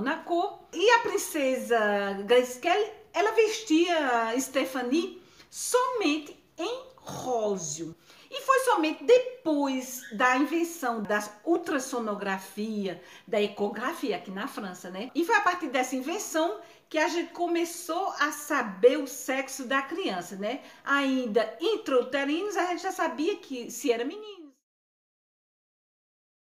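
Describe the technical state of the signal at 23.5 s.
The signal is intact at 23.5 s, where a smooth fade-out begins around that point and lowers the level gradually, with no click or hard edge, until 24.66 s.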